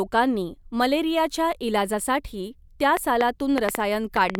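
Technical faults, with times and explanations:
2.97 to 4.36 s, train of clicks: Something is likely injecting short pulses into the signal path here, such as interference from nearby equipment or a faulty connection or power supply. The pulses arrive about 5 times a second, around seven in all, at an uneven pace and with much the same shape each time. They sit well above the level of the speech, so they come through as sharp ticking over the talking and in the gaps between.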